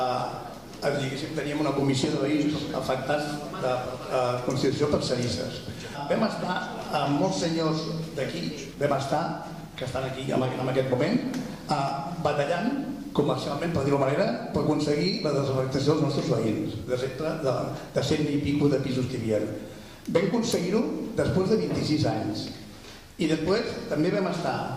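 At 5.95 s there's a skip ahead: about a second and a half of audio just vanishes, and playback jumps forward with the two sides stitched almost directly together. From 6.5 to 17.3 s comes a jitter buffer speed-up. The buffer was over-full, so tiny pitch-period slices kept getting trimmed. The sound runs about 4% fast at unchanged pitch, shedding nearly half a second overall.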